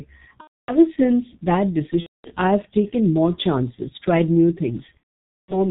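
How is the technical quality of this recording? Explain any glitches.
The recording is poor: it has low-bitrate codec damage throughout and three dropouts.

G.723.1 codec: heavy low-bitrate compression, consistent with about 6.3 kbit/s G.723.1, cuts everything above 4 kHz and tracks the voice coarsely, so the speech sounds muffled and hoarse with smeared consonants.

VoIP packet loss concealed by the speech codec: packets went missing from 0.41 to 0.78 s, just before "since that"; from 2.00 to 2.30 s, between "since that" and "I've taken more chances"; and from 4.97 s to the end, after "more chances tried new". The decoder stretched its last pitch and filter with falling gain, so each gap starts as a brief fading sound that is muted from the third lost frame, and after the first two gaps the recovering speech stays weak or distorted.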